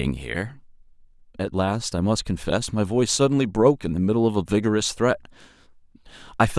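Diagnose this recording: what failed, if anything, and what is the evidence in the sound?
Nothing in this speech recording points to a failure at any stage of the chain. No dropout, distortion, glitch or other disturbance can be heard anywhere in the sound.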